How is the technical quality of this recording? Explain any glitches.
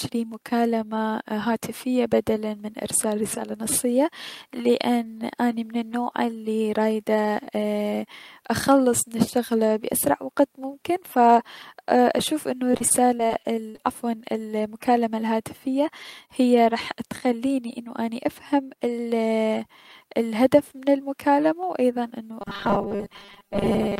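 Two distinct glitches affect the recording, both brief and both near the second half.

From 12.71 to 13.80 s there is repeated packet loss, heard as robotic sound. Nine short holes fall in just over a second, the longest about 46 ms. Each is papered over by stretching the preceding audio, so about a fifth of that stretch is patched-in sound rather than real signal. The result is choppy, with fragments dropping out.

From 22.41 s to the end, the speech turns into a rigid, metallic buzz pitched at 200 Hz. This is robotic sound from repeated short buffers. The steady pitch means the same 5 ms slice is looping over most of the stretch, likely because fresh audio was reaching the playback buffer too rarely. Unlike the earlier packet loss, which is choppy and full of holes, this is continuous and locked to one fixed tone.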